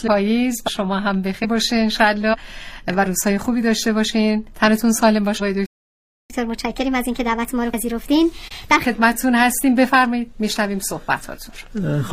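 At 5.66 s the audio cuts to silence for about 0.64 s, a playback stall, most likely because the player's buffer ran dry or its output thread was blocked. It resumes at 6.30 s, then enters catch-up at higher speed until 8.85 s. The player runs its backlog at 1.25 times normal speed by resampling, so pitch rises by about four semitones along with tempo. Once the lost time is recovered, speed and pitch return to normal.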